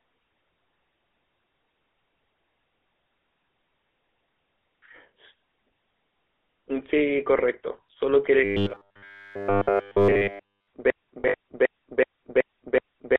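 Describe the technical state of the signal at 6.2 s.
At 6.2 s, as throughout the clip, the speech carries GSM full-rate codec damage. Pulse-driven vocal-tract modelling with thinned excitation gives a buzzy, gravelly roughness. Plain 300 Hz–3.4 kHz band-limiting would only dull the sound; this coarse texture fits 13 kbps full rate.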